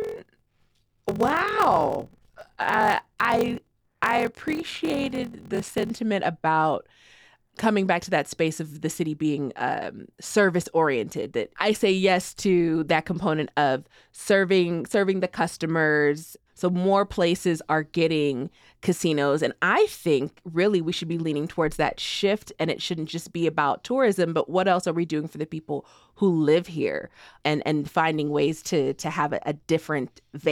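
Speech, with a block size mismatch (padded) from 0 to 5.90 s. Each block arrives short and is filled out with silence. That puts a 43.1 Hz buzz over the speech, fitting a 1024-sample read block. The speech also runs slow, at 0.861 times normal speed.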